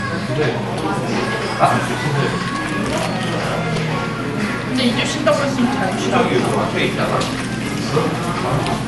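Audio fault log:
throughout, generation loss: swirly, hollow, smeared sound with blurred attacks and nothing above 11.8 kHz, likely from around ten successive passes through 96 kbit/s MP2, each adding fresh quantisation noise.
3.77 s, repeated buffer: a tiny slice sounds three extra times with hard joins, heard as a brief buzz; the repeat length fits a 128-sample buffer, about 2.9 ms.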